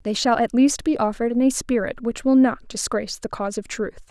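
No technical faults are audible.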